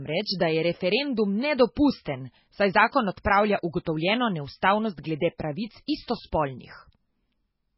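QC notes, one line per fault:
Throughout, MP3 compression: the speech sounds watery and swirly, with nothing above 5.6 kHz and smeared consonant attacks. The likely cause is a very low-bitrate MP3 encode, around 16 kbps judging by the heavy damage, cutting the treble and switching weak frequency lines on and off.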